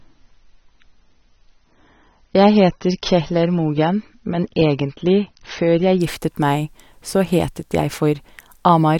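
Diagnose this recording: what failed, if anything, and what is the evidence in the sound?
The player began on a low-bitrate version of the adaptive stream and switched to a higher-quality one once it had gauged the connection. From 0.0 to 6.0 s the speech has nothing above 6.3 kHz, so it sounds dull and carries heavier codec artefacts, which fits an AAC version around 24 kbit/s. At 6.0 s the treble returns abruptly with no gap, consistent with a step up to roughly 96 kbit/s.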